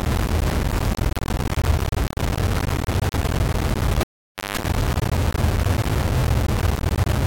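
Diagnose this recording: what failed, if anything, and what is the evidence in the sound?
Sample-format conversion is the likely culprit: low bit depth without dither, at what sounds like only 3 bits, rounded. For the whole clip, a harsh grain rides along with the sound, almost as loud as it. Quiet stretches sputter or drop out as the signal snaps between a handful of coarse steps.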